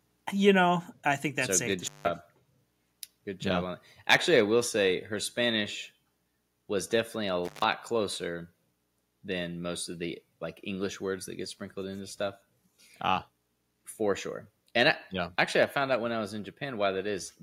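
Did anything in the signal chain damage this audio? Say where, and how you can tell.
Yes. At 1.02 s, before "I think that's so", and at 15.63 s, between "I yeah actually" and "I found out when", voice and background drop together by about 3 dB, then about 2 dB. This is a microphone volume stepped down, likely by call software. The waveform envelope shrinks abruptly, and every spectrogram band dims at once.

From 4.10 to 4.39 s, just before "I will say her", the loudest syllables turn harsh and crackly. This is microphone overload at the converter, likely from input volume set too high, with peaks about 8 dB over full scale. The waveform shows flat-topped peaks, and the spectrogram shows bright broadband smears above the harmonics.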